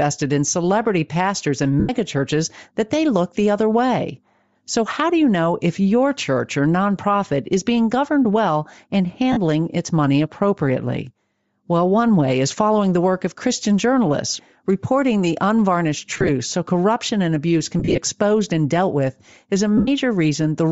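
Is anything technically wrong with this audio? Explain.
Yes. Throughout, the speech has a breathy, grainy edge. This is likely Bluetooth LC3 compression. At a low rate, near 32 kbps with 7.5 ms frames, the codec discards upper spectrum and fills it with noise.

There are also lost LE Audio frames. The decoder repeats the last spectrum with random signs, so the speech briefly smears into noise. This happens at 1.80 s for 90 ms and at 9.32 s for 45 ms, between "being governed well and" and "its money appropriately". At 16.11 s, after "journalists reporting the unvarnished", 82.5 ms is lost in short bursts over about 180 ms. At 17.79 s, after "corruption and abuse can", 120 ms is lost in bursts over about 180 ms. At 19.77 s, 97.5 ms is lost.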